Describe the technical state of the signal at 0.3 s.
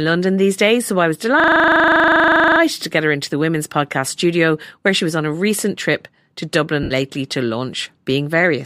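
At 0.3 s the speech is intact, with no dropout, distortion or other fault, and the light treatment that likely comes from Bluetooth LC3 compression is only light there.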